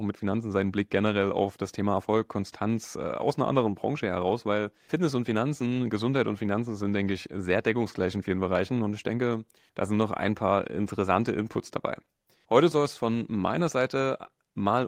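Listening to the speech recording, nothing stood out as a technical problem anywhere in it.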